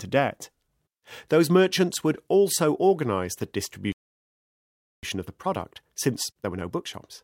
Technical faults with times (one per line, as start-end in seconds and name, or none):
3.92-5.03 playback stall
5.03-7.23 time-compressed catch-up